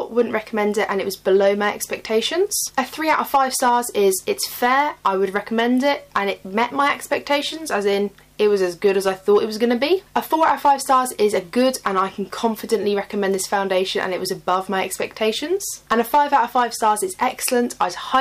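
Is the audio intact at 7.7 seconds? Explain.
No. At 7.7 seconds the audio is affected by hard clipping, which runs through the whole clip rather than starting or stopping near that moment. The signal was driven about 7 dB beyond what a stage in the chain could pass, so its peaks are sliced flat. Only a small share of samples, well under one percent, hit the ceiling, which makes the result a crackle on the loudest moments rather than constant fuzz.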